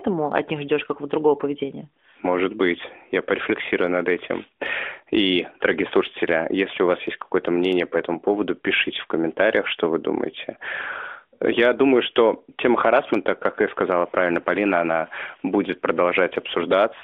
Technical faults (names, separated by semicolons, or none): none